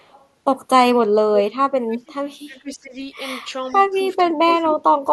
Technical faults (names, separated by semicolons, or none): echo leak; speech suppressed in double talk